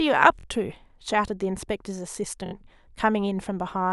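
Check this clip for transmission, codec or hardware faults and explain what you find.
Two spots have a repeated buffer fault, at 0.40 to 0.44 s and again at 2.46 to 2.53 s. Fresh audio didn't reach the output in time, so the device replayed its last chunk, a slice of about 23 ms, which fits a 1024-sample buffer. The first slice plays twice more and the second three times more, each with a hard join. Chunks that short come across as a quick buzzy stutter, and essentially no audio is lost.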